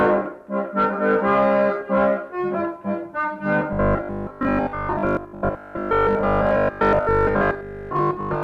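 From 3.73 s to 8.43 s the audio turns into robotic sound from repeated short buffers: a rigid metallic buzz at 50 Hz, likely from 20 ms chunks being replayed while most of the real audio is skipped. Unlike mains hum at the same frequency, the buzz replaces the sound rather than sitting underneath it.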